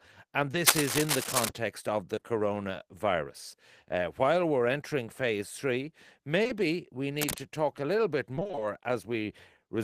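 Speech clip with three kinds of fault. Short concealed packet loss occurs at 0.51 to 0.55 s, 2.15 to 2.23 s and 6.43 to 6.51 s. Each time 20 to 40 ms of audio failed to arrive, and the receiver extended the preceding sound to cover the hole before blending back. The result is a brief smear or wobble. On a spectrogram the harmonics freeze into flat, slightly blurred lines for those few hundredths of a second, with a soft seam where real audio resumes. Cable scratch noise runs from 0.66 to 1.49 s at roughly the level of the speech, and again from 7.19 to 7.38 s about 5 dB below it. It is heard as rustling, crackly bursts over the sound, likely from a worn cable or connector being moved so its contact resistance jumps about. A waveform shows ragged, spiky noise riding on the signal, and a spectrogram shows irregular broadband vertical streaks. Repeated packet loss (robotic sound) fills 8.35 to 8.63 s. 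Seven separate 20 ms holes, 140 ms in all, left half of that stretch concealed, so the patched pieces alternate rapidly with real audio and the sound turns choppy. On a spectrogram this appears as a chopped pattern of repeated, flattened slices in place of smoothly changing harmonics.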